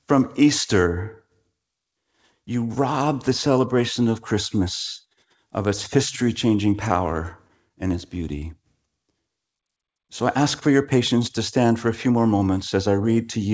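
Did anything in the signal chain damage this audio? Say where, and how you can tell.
Yes, at the network stage. Between 7.29 and 7.91 s, scattered short gaps, roughly four brief holes of about 10 ms each, leave small ticks and smears. The receiver's concealment extended the preceding sound, so unlike a single dropout nothing goes silent. The G.722 call path's cutoff at 8 kHz is a codec limit, not damage.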